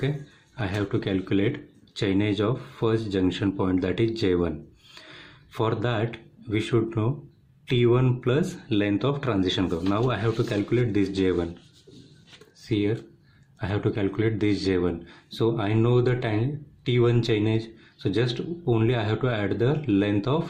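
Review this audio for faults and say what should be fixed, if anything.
Nothing in this audio needs to be fixed, as the review found no faults.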